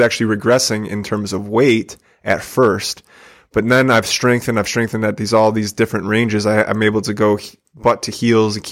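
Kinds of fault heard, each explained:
Underrun with held sample: output starved at 5.74 s, freezing the waveform flat for 5.3 ms. On a spectrogram it is a thin gap, then playback resumes with about 5 ms of audio skipped.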